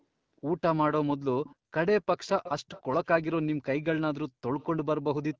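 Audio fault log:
1.44–1.55 s, 2.27–2.50 s, 2.67–3.07 s, 4.60–4.66 s: echo leak. A faint copy of the speech trails it by about 300 ms, some 15 to 25 dB down and loudest near 2.3 s. The likely cause is a loudspeaker end whose echo canceller let part of its microphone pickup return.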